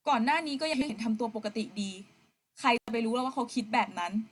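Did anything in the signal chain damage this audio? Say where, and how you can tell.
Yes. Frames out of order at 0.73 to 0.92 s, a network-stage fault: two neighbouring 80 ms blocks, which fits two runs of four frames each, were decoded swapped. The speech garbles into a brief flutter, and no time is lost.

Intermittent contact at 2.76 to 2.90 s, in the analogue wiring: a loose cable or plug opened for about 99 ms. The speech cuts out abruptly with crackle at both edges, and faint hiss remains while the connection is broken.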